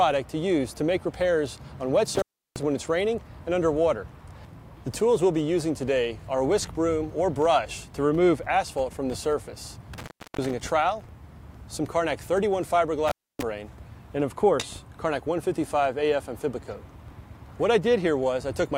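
Intermittent contact breaks the sound three times: at 2.15 to 2.63 s, 9.94 to 10.51 s, and 13.08 to 13.43 s. A loose connection opens for about 340, 330 and 280 ms. The signal drops to faint hiss, with crackle at each edge.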